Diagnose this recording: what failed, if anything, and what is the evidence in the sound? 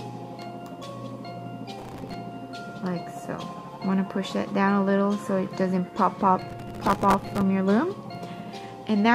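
Processor overload crackle at the driver/buffer stage, 1.79–2.14 s and 6.39–7.41 s: missed few-millisecond buffers repeat old audio, showing as dense vertical broadband streaks and waveform discontinuities.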